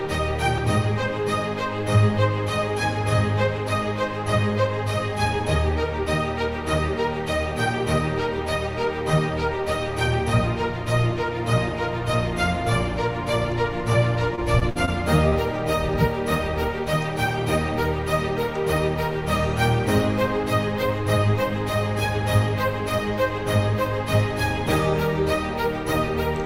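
The audio has repeated packet loss (robotic sound) from 14.35 to 14.89 s. Four holes, the longest about 60 ms, were each patched by extending the preceding sound, so roughly 120 ms, about a fifth of that stretch, is synthetic fill. It sounds choppy. On a spectrogram the patches appear as short blocks of frozen, smeared harmonics with blurred onsets. The waveform shows unnaturally regular, repeating cycles where real detail should be. Shortly after, from 15.29 to 15.33 s, a short concealed packet loss of about 20 ms was covered by continuing the last sound and blending back into the real signal. It is heard as a brief smear or wobble. A spectrogram shows a thin vertical slice of stretched, slightly blurred energy, and the waveform a few repeated cycles with a soft crossfade.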